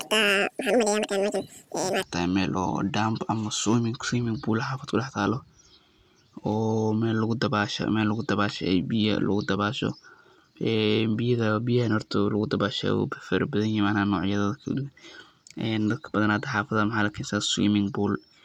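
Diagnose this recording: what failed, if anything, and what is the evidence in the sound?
Audio read two samples at a time (double speed), from 0.0 to 2.03 s. It is a sample-format conversion fault: the speech runs twice as fast and an octave high because pairs of samples were treated as single frames.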